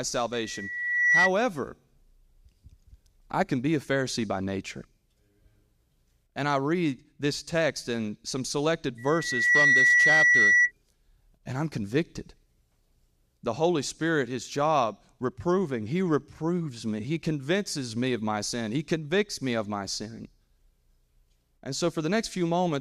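Right at the start, from 0.33 to 1.31 s, there's a loudspeaker feedback squeal: a steady tone near 2 kHz that swells over well under a second until it's about 10 dB above the speech. The mic is hearing its own loudspeaker, and at that frequency the loop gain tips past one, so it feeds itself. It happens again from 8.98 to 10.72 s at the same 2 kHz, ramping up faster this time, in roughly half a second.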